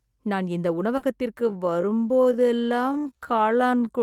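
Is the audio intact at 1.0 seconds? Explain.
No. Just after "நான் இந்த", from 0.97 to 1.03 s, there is short concealed packet loss: about 40 ms of the call arrived too late, so the receiver extended the preceding speech and faded back in. It is heard as a brief smear or wobble.

Within that span, from 1.01 to 1.03 s, one lost packet was rebuilt from error correction. The following packet carried a low-bitrate copy of it, and the decoder played that 20 ms copy, so there is no gap. That stretch sounds rougher and noisier, and a spectrogram shows grainier, less defined detail there.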